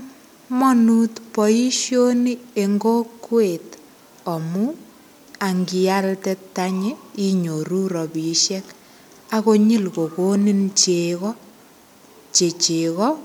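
No technical faults can be heard in the speech at any point.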